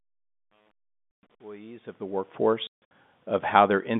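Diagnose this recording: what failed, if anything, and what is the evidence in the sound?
The speech drops out abruptly into dead silence, with hard edges: once from 1.16 to 1.23 s, and again across 2.67 to 2.91 s, where roughly 210 ms vanishes in several holes, the longest 150 ms. This is packet loss filled with silence at the network stage. The receiver inserted silence for each missing packet, and the gap lengths fit 30 ms packets. The narrow telephone band of the G.711 line stays intact around the holes.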